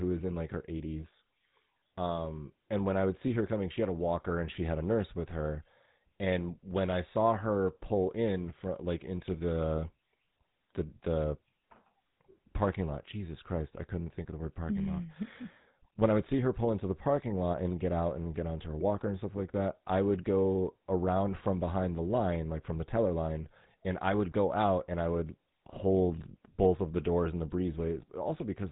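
The whole clip carries GSM full-rate codec damage, and it is plainly audible. The speech sounds buzzy and gravelly. The codec rebuilds it from a vocal-tract model and coarse pulse excitation, which fits a 13 kbps stream. Nothing survives above 3.9 kHz.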